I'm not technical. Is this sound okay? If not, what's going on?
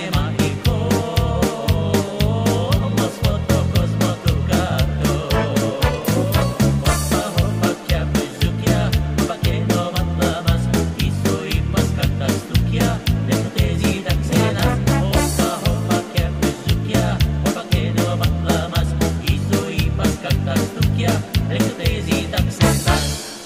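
No. Periodic USB or driver dropouts: from 4.52 to 7.02 s the audio connection stalls every half second, leaving silent gaps heard as regular ticks.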